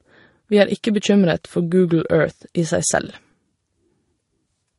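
Transcoding between lossy codecs runs through the whole speech clip. Nothing is present above 11.2 kHz, so sibilants sound dull and clipped at the top. The speech most likely passed through an MP3 encoder at about 48 kbit/s and was then re-encoded as Vorbis at about 41 kbit/s. The second encoder spent part of its small budget reproducing the first one's artefacts and added its own, so two layers of coding artefacts sit together on the speech.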